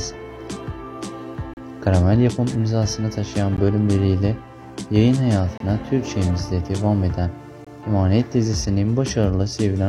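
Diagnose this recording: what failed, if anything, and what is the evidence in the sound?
Hard-edged silent holes at 1.54–1.57, 3.57, 5.58–5.60 and 7.65–7.67 s, spaced about 2 s apart: gaps between stream segments at playback, where misaligned timestamps leave silence but lose no audio.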